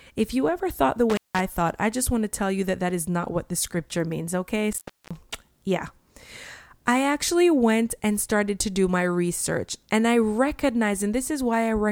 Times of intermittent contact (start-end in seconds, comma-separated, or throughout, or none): 1.10-1.40, 4.72-5.17